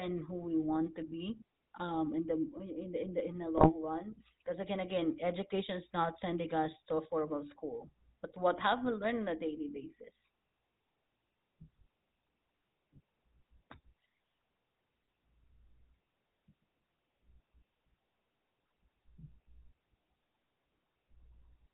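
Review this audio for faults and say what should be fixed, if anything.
The whole clip carries the GSM full-rate codec sound. The speech is buzzy and gravelly because the decoder rebuilds the vocal tract from a filter driven by a coarse, regularly spaced pulse train that keeps only a third of the excitation detail. That damage is plainly audible here and fits the 13 kbps full-rate mode. On a spectrogram, energy stops sharply near 4 kHz, and the harmonics look smeared and grainy, with striped pulse structure. The fix is to use a wideband codec such as AMR-WB or Opus, or to take the recording from the uncompressed source before it goes through the phone network.

GSM bit errors break up the sound from 3.57 to 3.71 s, just after "in the in the". Corrupted filter, pitch and gain parameters reached the decoder, so for a brief run of frames the spectrum warps and the level jumps, giving a squawking, gargling burst. 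Four frames were damaged. On the waveform this shows as a sudden spike in amplitude. On the spectrogram it appears as a blocky column of misplaced energy and formants that look wrong. A stronger radio link or better error protection and concealment on the channel would prevent it.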